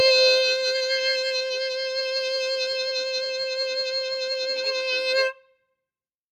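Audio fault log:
Throughout: noise suppressor applied to music. A suppressor built for speech stayed active and treats sustained tones, ambience and reverb as noise. Attacks pass while held sound and decay tails are pulled down, so the level swings by around 5 dB.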